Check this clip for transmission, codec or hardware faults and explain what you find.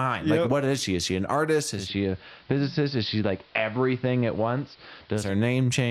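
One fault is present: digital radio blending to analogue, from 1.68 to 5.37 s. The receiver lost its digital stream and cross-faded over 257 ms to the station's AM broadcast. Level drops about 1 dB, and faint hiss appears. The hiss and gradual cross-fade distinguish it from a codec bandwidth drop.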